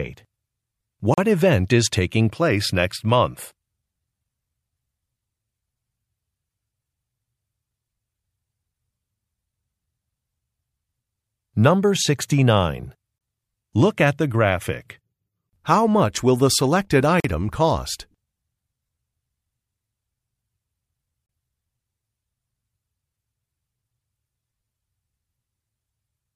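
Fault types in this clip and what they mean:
Gap between stream segments: hard-edged silent holes of 25 to 43 ms at segment joins roughly 4 s apart; unlike dropouts, nothing is lost, only delayed.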